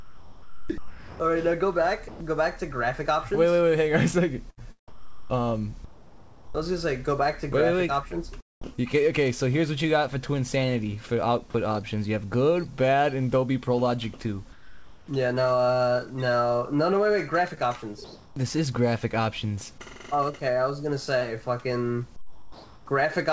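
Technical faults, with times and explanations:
0.00–2.20 s and 4.50–6.55 s, sound chopped by the voice detector: in both stretches the sound keeps dropping out and coming back, with about 1.2 s in each replaced by a flat hiss. The likely cause is the sender's voice detector flipping on and off, so quiet edges get cut and comfort noise fills the gaps. That's why it sounds choppy.
8.76–8.79 s, short concealed packet loss: there's a tiny smear here. About 20 ms of audio never arrived in time, and the receiver patched roughly 11 ms of it by stretching the last bit of sound before blending back into the real signal.
14.52–15.08 s, 18.04–18.36 s, 22.16–22.86 s, comfort noise in place of the background: in these three pauses the real background, sitting about 26 to 27 dB under the loud parts, gets swapped for a smooth, featureless noise. This is likely discontinuous transmission, with the sender going silent and the receiver generating its own filler. 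The level jumps at each swap: about 5 dB quieter in the first, about 3 dB louder in the second, and about 3 dB quieter in the last. The detail of the background vanishes until the sound resumes, and the top end stops around 8 kHz, which fits a 64 kbps G.722 call path.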